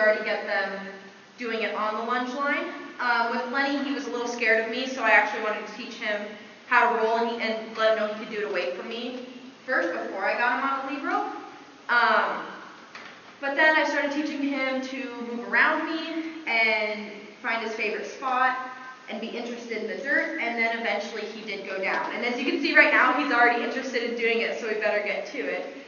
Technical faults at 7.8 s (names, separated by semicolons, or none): none